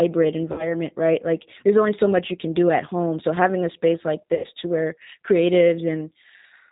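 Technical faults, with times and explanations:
throughout, G.729 codec: the 8 kbit/s codec rebuilds speech from a vocal tract filter, pitch predictor and sparse pulses, cutting everything above 4 kHz and leaving a plainly rough, synthetic edge.
0.52–0.75 s and 4.35–4.47 s, VoIP packet loss concealed by the speech codec: about 60 ms and 90 ms went missing. The decoder stretched its last pitch and filter into a fading buzzy tone or coloured noise, and the voice stays weak or distorted afterward.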